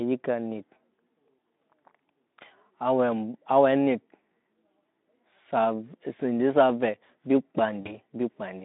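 At 7.81 s, VoIP packet loss concealed by the speech codec breaks into the speech. About 40 ms of audio goes missing, which fits two lost 20 ms frames. The Speex decoder fills the gap by repeating its last pitch and filter at falling gain. A short smear of buzzy tone or coloured noise results. The speech stays weak until about 7.97 s.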